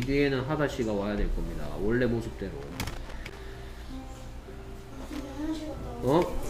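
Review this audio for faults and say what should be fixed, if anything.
Loose connector crackle occurs from 2.62 to 3.38 s and again from 5.13 to 5.20 s. A worn or dirty contact is making and breaking as it shifts, chopping the signal into irregular scratchy bursts. Buffer-underrun clicks, by contrast, are evenly spaced and alike. Clean the contacts and reseat or replace the cable before recording.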